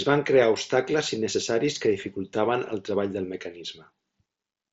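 No faults are audible in this speech; it arrives over what sounds like a Bluetooth mSBC headset link, with the band stopping at about 7.7 kHz and only a light graininess from the codec.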